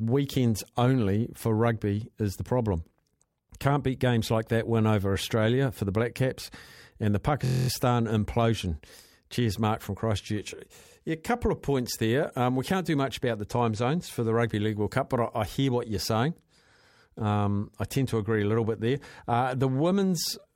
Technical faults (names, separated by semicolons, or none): system hang loop